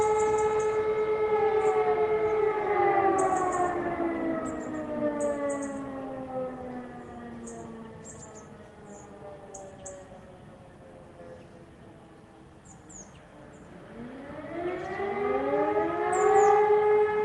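Nothing stood out on listening to this audio, which came through a call path with its expected codec character.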